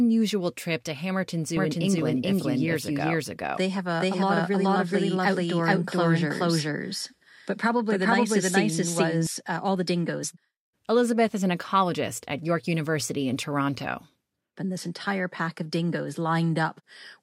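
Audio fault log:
1.57–9.27 s, doubled audio track: a second full-band copy of the speech trails about 400 ms behind at roughly the same level, with no decay or room colour, and it cuts in and out abruptly. Most likely a slower second capture path being mixed in.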